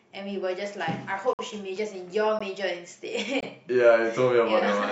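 At 1.33 to 1.39 s, at 2.39 s, and at 3.41 to 3.43 s, the speech breaks into hard-edged silence. Each is a gap between stream segments: timestamps of consecutive one-second segments leave holes of about 55, 17 and 22 ms, filled with silence, with no audio lost.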